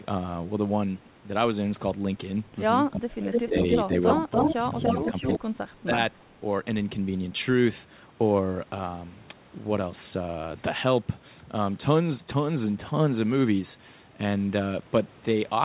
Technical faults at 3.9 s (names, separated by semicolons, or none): echo leak; speech suppressed in double talk